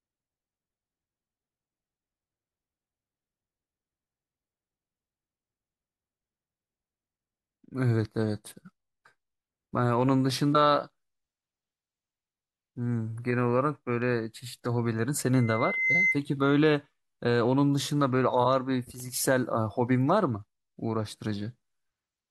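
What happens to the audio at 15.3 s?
A loudspeaker feedback squeal runs from 15.33 to 16.20 s. The speaker's output re-enters the microphone, and a 2.1 kHz tone builds over about half a second to roughly 5 dB above the speech.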